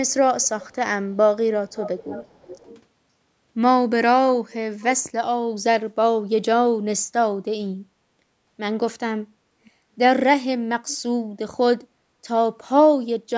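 Faint, delayed repeats of the speech appear at 0.42 to 0.75 s, 1.69 to 2.82 s, 9.65 to 9.70 s and 10.88 to 10.97 s. This is echo leak, likely from a loudspeaker whose echo canceller let its own playback slip back into the call. The first copy trails by 414 ms and the rest by 523 ms. They range from barely audible to about 15 dB below the speech. Room reverberation fades smoothly; these are distinct, late, separate copies.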